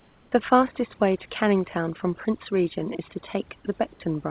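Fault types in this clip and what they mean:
Overdone noise removal: aggressive suppression switches individual frequency bands off, leaving near-black gaps with scattered twinkling specks on the spectrogram.
Comfort noise in place of the background: from 0 to 0.32 s a flat, featureless hiss about 2 dB quieter stands in, likely from discontinuous transmission. It shows as uniform spectrogram texture.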